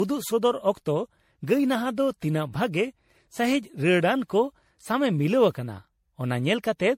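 Right from the start and all the way through, this speech has the swirly, hollow, smeared character of generation loss, with consonant attacks blurring and nothing above 16.5 kHz. The likely cause is the audio going through an MP3 encoder around ten times, with each pass quantising again on a shifted frame grid so the noise and spectral holes pile up. That sounds worse than a single 64 kbit/s encode would.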